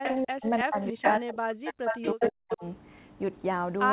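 At the far end the loudspeaker's sound was likely not fully removed by the echo canceller, so an echo leak sends a delayed copy of the speech back. It appears from 0.03 to 0.16 s, about 5 dB below the speech and trailing by 322 ms. From 0.23 to 0.47 s, speech suppressed in double talk follows, likely because the canceller could not tell the local talker from that echo while both were active and turned everything down. The speech dips by as much as about 40 dB over roughly 200 ms. The same suppression returns from 0.64 to 1.03 s over roughly 300 ms. Overlapping it, from 0.80 to 1.15 s, a leaked copy now lags by 358 ms at about 5 dB down. The longest suppression runs from 1.19 to 2.63 s, affecting about a second of speech. Inside that stretch the echo leak is at its worst from 1.69 to 2.30 s, with the 358 ms copy about as loud as the speech itself. A brief final scrap comes at 2.50 to 2.56 s, about 5 dB down. 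All of it sits in the narrowband G.711 call band, with nothing above 4 kHz.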